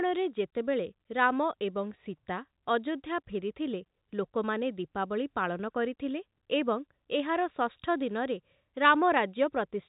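Nothing in the speech stood out as a fault on listening, with the audio heard throughout as ordinary telephone-band sound carried by G.711 coding.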